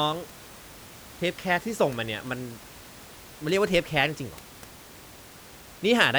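There are no technical faults to describe, at any point in time.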